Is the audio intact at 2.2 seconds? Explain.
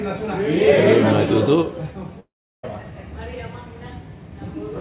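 No, at 2.2 s the sound smears into a fading buzz, then about 0.36 s of silence until 2.65 s, likely a long network dropout losing roughly 0.44 s of audio.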